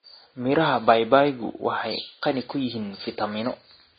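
Throughout this speech clip the sound is dull and smeared, with swirly, watery artefacts layered over a band-limited top end, while the room noise sits about 54 dB below the speech. This is likely transcoding between lossy codecs, with low-rate AAC followed by Vorbis near 24 kbit/s stacking their artefacts.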